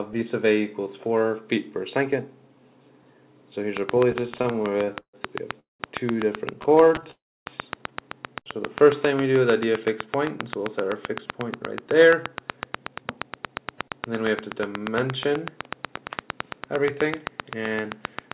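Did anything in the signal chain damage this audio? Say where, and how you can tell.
Yes. From 3.77 s to the end there's a regular train of clicks, about 7.7 per second and well above the signal, likely from interference or a faulty connection or power supply on the analogue side.

Repeated stalls (stutter) at 4.12–5.15 s (14 gaps, longest 136 ms) and 6.54–7.11 s (9 short gaps): the jitter buffer kept running dry, so the audio drags without losing anything.

Two call audio freezes, at 5.60–5.82 s and 7.11–7.48 s, each adding a mostly silent hold of about 0.2 s and 0.35 s, likely from packets held up on the network.

Jitter buffer slow-down from 8.53 to 9.39 s: the receiver repeated pitch periods, adding 66 ms, so the sound runs at 93% speed, same pitch, slightly drawn out.

Jitter buffer speed-up from 11.12 to 16.91 s: short pitch-period chunks are trimmed, roughly half a second in total, so the audio runs at 109% speed and sounds hurried. 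All this rides on a G.711 A-law call path, with nothing above 4 kHz.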